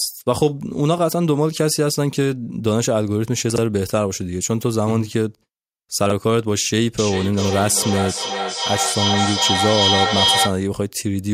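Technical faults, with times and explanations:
3.5–3.58 s and 6.06–6.12 s, chunks out of order: In each spot a 20 ms block of audio plays late, three blocks after its proper place at 3.5 s and two blocks after it at 6.06 s. No audio is missing, but the sequence is scrambled over a few tens of milliseconds. That produces a brief jumbled stutter, with three abrupt joins where mismatched waveforms meet.
6.98–10.63 s, feedback echo between two devices: The speech returns at an interval of around 0.4 s, each repeat thinner and more ringing than the original. Two devices on the same call are likely sharing one room. One device's loudspeaker plays audio captured from the other, and that microphone picks it up and sends it back. Neither echo canceller removes sound played by the other device, so the loop circulates and builds to about 1 dB above the direct speech.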